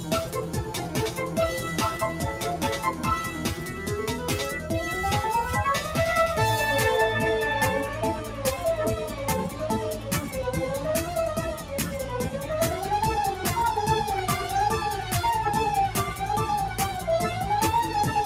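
A noise suppressor applied to music or sounds stays active throughout, treating sustained material and decay as noise. Attacks pass while held portions sag, so the level swings by around 5 dB and the texture pumps and thins.

Sound cut by the noise suppressor occurs from 0.0 to 1.37 s, from 3.31 to 3.88 s, and from 8.23 to 8.4 s, with each dip reaching about 5 dB. The gain reduction clamps steady or fading parts, shortening tails and leaving the affected stretches quieter.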